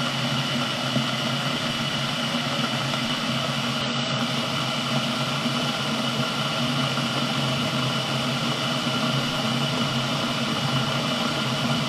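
Damaged data in a compressed stream appears at 3.81 to 3.86 s: a corrupted stretch of the encoded file left the decoder unable to read those frames correctly, so it lost sync and hunted for the next valid frame header, breaking the sound for about 50 ms.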